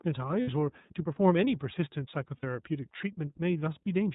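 Speech that sounds narrow, a little rough and synthetic throughout, with nothing above 4 kHz. This is the iLBC codec, which codes each frame's excitation independently, and the plainly audible damage fits its 30 ms frame mode at about 13.33 kbps. At 0.42 s and again at 2.37 s, a roughly 60 ms stretch turns into a held, slightly buzzy vowel before the voice snaps back. These are lost iLBC frames: the decoder filled each gap by repeating the last pitch cycle mixed with noise, and because frames stand alone, recovery is almost immediate.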